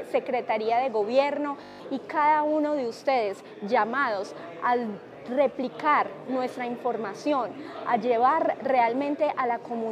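At 1.64 s the audio locks into a system hang loop lasting until 1.8 s: the machine stalled while the sound hardware kept replaying the same 20 ms stretch of its ring buffer, eight times over. The result is a steady 50 Hz buzz rather than a stutter, and roughly 150 ms of audio never arrives. On a waveform the span shows one identical short cycle tiled end to end; a spectrogram shows harmonic lines spaced every 50 Hz.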